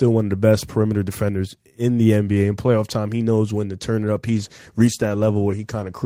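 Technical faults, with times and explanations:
4.27–6.05 s, call bitrate drop: from 4.27 s to the end the speech grows coarse and dull, which fits the encoder falling from about 32 to 17 kbps and trimming the highs. Unlike packet loss, nothing drops out; the texture simply degrades and stays degraded.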